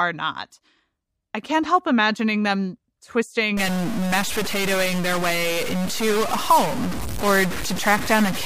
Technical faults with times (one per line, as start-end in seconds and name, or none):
3.57-8.46 stuck bit